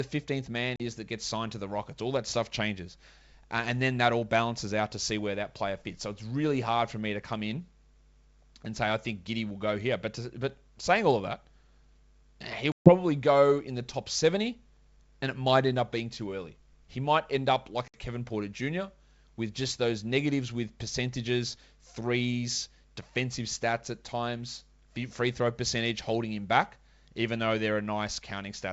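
At 0.76 s, just before "is that gets signed", the G.722 wideband speech drops out for 40 ms, a gap that fits a couple of lost packets. At 12.72 s, before "go in the top", a 140 ms hole suggests about seven, and at 17.88 s, after "might end up", 60 ms goes. This is packet loss on an ADPCM call. Silence fills each gap, the decoder's predictor and step size drift from the sender's, and speech resumes with brief, slight distortion.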